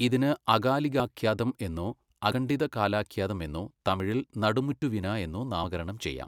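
At 1.0 s the speech jumps forward, losing about 20 ms, likely a dropped buffer (overrun) where the samples were overwritten before being read. Similar skips follow at 2.32 s, about 40 ms, just before "കാലാഖൃാതം എന്നോ"; at 4.0 s, right after "കാലാഖൃാതം എന്നോ", about 20 ms; and at 4.82 s, about 20 ms. The longest is about 70 ms at 5.64 s. None leaves a gap of silence.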